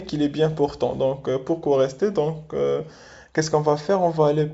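Nothing here sounds wrong to me: it's a speech recording that comes across as ordinary wideband telephone audio, consistent with G.722 coding at 64 kbit/s, with the sound reaching up to about 7.7 kHz before falling away.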